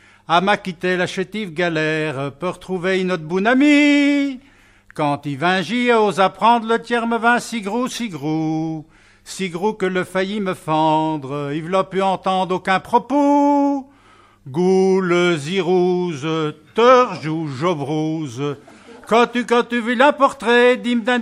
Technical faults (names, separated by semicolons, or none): none